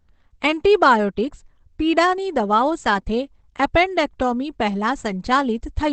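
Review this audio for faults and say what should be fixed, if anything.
The encoder was likely pushed to a very low Opus compression rate, which dropped it into its speech-oriented SILK mode, consistent with roughly 12 kbps. Across the whole clip the speech sounds muffled and hoarse, with heavy codec damage: the top end stops dead at about 8.6 kHz, removing air and sibilant detail, and voiced sounds carry a rough, coarse texture. To prevent it, encode at a substantially higher bitrate so Opus can keep full bandwidth.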